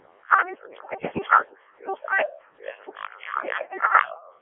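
Codec 2 vocoder damage runs from start to finish. The speech has been reduced to a few parameters, pitch, voicing, energy and a coarse spectral envelope, and then rebuilt from sine waves, so none of the original waveform survives. The result is heavily robotic and buzzy, with a smeared, synthetic quality that points to the lowest mode, around 0.7 kbit/s. It sits in a telephone-style band of 300 Hz to 3.4 kHz, with nothing above 3.8 kHz.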